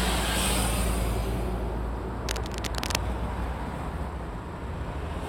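From 2.27 to 3.02 s there's a stretch of cable scratch noise, a dense, ragged crackle and rustle laid over the sound for most of a second. It's fairly loud, only a little below the sound itself, so it's hard to miss. The likely cause is a worn cable, plug or control getting moved, with its contact resistance jumping around quickly and spraying uneven bursts of noise into the signal until things settle again.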